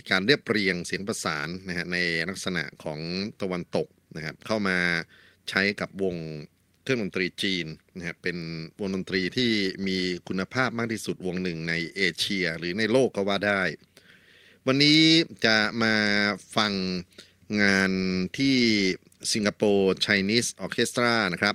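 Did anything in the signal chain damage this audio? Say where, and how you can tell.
No, nothing along the chain from capture to playback has audibly damaged this speech recording.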